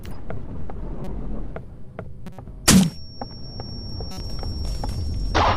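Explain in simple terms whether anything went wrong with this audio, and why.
Three short chirpy bursts of noise cut in, at 1.04 to 1.08 s, 2.26 to 2.39 s and 4.12 to 4.21 s. Each is a corrupt frame decoded: a few damaged chunks of compressed data were played anyway, scattering sound into the wrong pitches briefly.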